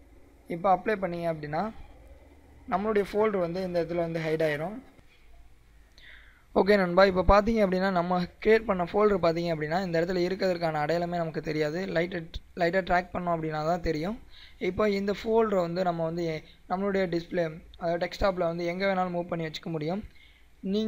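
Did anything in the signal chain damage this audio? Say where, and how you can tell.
Yes, at the converter. From 1.64 to 5.91 s there's a rough, metallic edge riding on the sound, which is periodic clock jitter. Something was wobbling the sample clock at a steady rate, somewhere around 1 kHz, so each component of the audio picks up sidebands spaced about that far above and below it. The higher content takes the worst of it, and it reads as grit rather than as a tone of its own.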